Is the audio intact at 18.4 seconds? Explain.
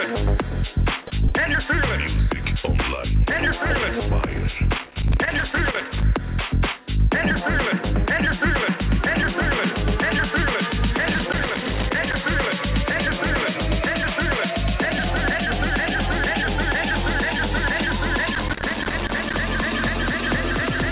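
No, there's loose connector crackle from 18.35 to 19.34 s: a worn contact keeps making and breaking, chopping the signal into an irregular, scratchy burst.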